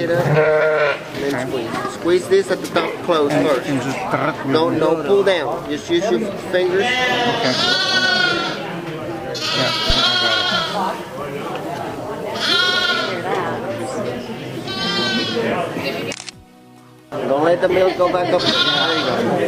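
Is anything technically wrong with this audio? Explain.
Yes. At 9.90 to 9.96 s, a phantom power thump: a supply switching on or off on the live input sends a voltage step through the coupling capacitors, giving a deep thump peaking near -5 dBFS and decaying in about 14 ms.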